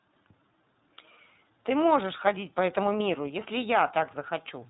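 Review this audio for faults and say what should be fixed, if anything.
Throughout, the speech sounds slightly rough and synthetic, with nothing above 4 kHz. This is iLBC codec damage: each 30 ms frame's excitation is coded independently, consistent with roughly 13 kbps. Prevent it by recording or transmitting through a wideband codec at a higher bitrate instead of iLBC.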